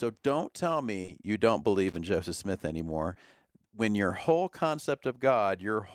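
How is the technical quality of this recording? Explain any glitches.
The recording has two kinds of glitch: three brief dropouts that were patched over, and one burst of crackle.

Short concealed packet loss occurs twice in a row from 1.01 to 1.09 s, just after "don't tell" and before "you don't", and once more at 3.13 to 3.17 s. Each time about 20 ms of audio arrived too late. The receiver extended the preceding sound to fill the gap and then blended back, which leaves a quick smear or wobble.

Loose connector crackle runs from 1.88 to 1.96 s, just after "you don't". A worn or dirty contact was rapidly making and breaking, chopping the signal into a short, irregular burst of scratchy crackle that lasts under a tenth of a second.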